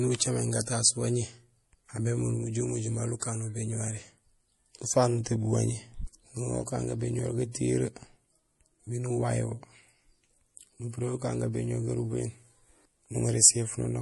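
MP3 compression runs through the whole speech clip: nothing sounds above 11.5 kHz, and the audio has a plainly audible watery, swirling texture with smeared attacks. This is likely a low-bitrate MP3 encode, consistent with about 48 kbps, where the encoder cuts the treble and drops weak frequency components that flicker between frames. Pre-echo appears from 3.20 to 3.22 s as a short hiss spreading about 25 ms ahead of a sharp attack, which sounds softened. The coding noise meant for the loud onset was spread across its whole block, filling the quiet moment just before it.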